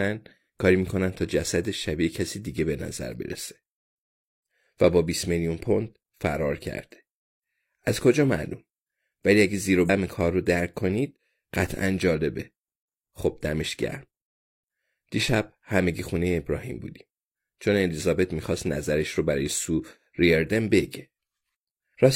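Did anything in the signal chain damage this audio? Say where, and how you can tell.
Yes, at the codec: compressed frames were skipped at 9.80–9.90 s. The speech jumps ahead about 50 ms.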